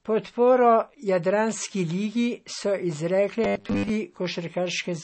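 Throughout, the speech sounds dull and watery. Nothing is heard above 8.3 kHz. This is MP3 compression, likely at a low bitrate of around 32 kbps. The encoder ran short of bits. It cut the treble and dropped weak detail.

From 3.44 to 3.89 s, the voice turns into a rigid, metallic buzz. This is robotic sound from repeated short buffers. New audio arrived too seldom, so short chunks were replayed over most of the span. The buzz sits at 100 Hz, which fits a likely 10 ms buffer.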